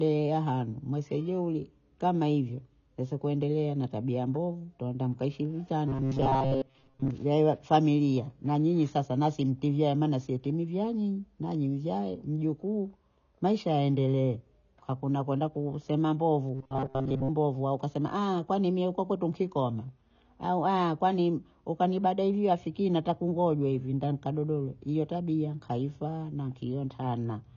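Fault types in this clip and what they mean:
AAC compression: The whole clip likely passed through a low-bitrate AAC-LC encoder, which fits a rate near 24 kbps. The codec splits each frame into frequency lines and coarsely quantises what the ear is least likely to notice. Here the damage is plainly audible. Nothing remains above about 7.1 kHz, so the speech sounds dull and muffled. Sibilants and sustained vowels take on a smeared, watery texture instead of clean detail.
Robotic sound from repeated short buffers: Twice the speech turns into a rigid metallic buzz at 133 Hz. The first runs from 5.88 to 7.11 s, after "tabia mbovu twatamka heshimu". The second runs from 16.54 to 17.30 s, before "mbovu au ukasema". Fresh audio likely arrived too slowly, so a tiny slice of about 7.5 ms kept looping. Most of the real audio was skipped. The loop rate sets that fixed pitch, while the speech rhythm still roughly shows through.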